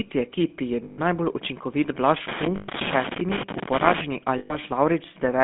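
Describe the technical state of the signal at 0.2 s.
At 0.2 s the speech is already running through GSM full-rate coding, which covers the whole clip. The codec models the vocal tract and drives that model with a sparse, regularly spaced pulse train, which gives the speech a plainly audible buzzy, gravelly roughness. The band is also narrow, from about 150 Hz to 3.6 kHz, so it sounds thin and phone-like. All of this fits the old 13 kbps GSM rate.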